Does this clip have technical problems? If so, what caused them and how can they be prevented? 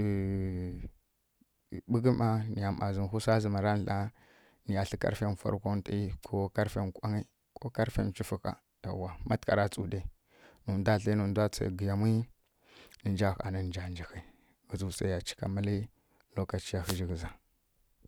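Yes: a wireless microphone noise hit from 16.81 to 17.00 s, a brief burst of static as the FM radio path fades under cancelling reflections and receiver noise rises over the speech. Prevention: use diversity receivers, keep antennas in line of sight and close to the transmitter, and choose clean frequencies.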